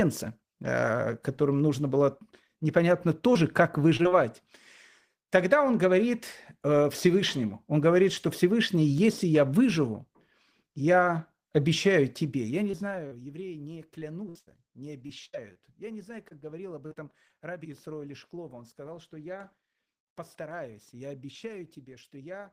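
Right after "которым нужно было непонятно", around 3.33 to 3.37 s, there's a short concealed packet loss: about 20 ms of speech never arrived, and the decoder patched it by carrying the last sound forward before blending back in. More follow in a tight cluster at 3.97, 4.03 and 4.09 s, then at 12.71 s and 13.07 s. That last one covers about 40 ms. Each is a quick smear or wobble, and a brief consonant can drop out.

From 13.99 to 15.57 s the losses come in a run of six gaps, the longest about 78 ms, with nearly a fifth of that stretch patched. That's repeated packet loss, and it turns the speech choppy, with pieces missing, because each patch barely finishes before the next hole. After "не знаю", from 16.29 to 17.35 s, it happens again with four shorter gaps of up to 39 ms. About a tenth of that span is filled.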